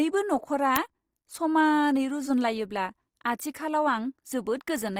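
Throughout the speech, the sound has a grainy, rough texture rather than the swirling, hollow quality of MP3. The band energies stay filled, and bands lacking bits are patched with folded or noise-like content, so few spectral holes open up. Bandwidth stays full, with content running up to about 20.4 kHz, so nothing is muffled. The likely cause is Opus compression in its CELT music mode, and the plainly audible damage fits a low rate of around 24 kbps.

At 0.76 s there is a single loud crack, about 1.3 ms long, which matches an uninitialised buffer of roughly 64 samples. Playback read that memory before any audio had been written into it, so leftover values came out as samples. Unlike a dropout, this is a sharp crack of leftover data rather than a gap.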